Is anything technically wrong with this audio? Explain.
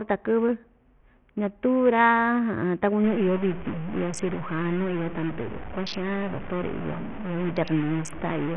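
Yes, there are two problems.

Throughout the speech, the sound is heavily band-limited and gritty, with nothing above about 11.2 kHz. This is likely Bluetooth SBC compression at a starved bit allocation, consistent with a rate near 48 kbps. The codec splits the signal into a few wide sub-bands and gives the weak upper ones no bits, while coarsely quantising the rest. Treble flickers and a rough grain clings to every syllable. A spectrogram shows a hard ceiling at 11.2 kHz, with blotchy, patchy energy beneath it.

From 3.04 s to the end, distortion sits on the speech and the gaps between phrases fill with hiss. This is a stuck bit, likely a data line or converter bit frozen at one value. About half the samples are shifted by that bit's weight in a pattern set by the waveform. Near silence, the offset flips with the sign, so the pauses carry noise. On the waveform, the quiet stretches thicken into a fuzzy band. 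A spectrogram shows broadband noise across all frequencies from 3.04 s onward.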